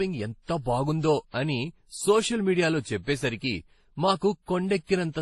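From start to finish the speech sounds smeared and swirly, with nothing above 12 kHz. That mix points to transcoding between lossy codecs, likely a low-bitrate MP3 passed through WMA and then Opus, each coder adding its own artefacts on top of the previous ones.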